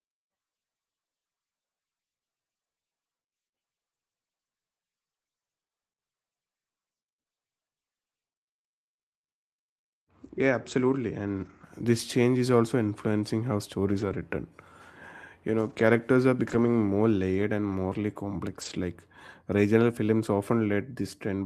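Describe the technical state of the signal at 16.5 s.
At 16.49 to 16.67 s, just before "more layered and morally", a lost packet was rebuilt from error correction: several dropped packets were replaced by the low-bitrate copies carried in the following ones, about 100 ms in all. The speech sounds briefly rougher and noisier with no gap. The waveform stays continuous, and the spectrogram shows a grainier, smeared patch.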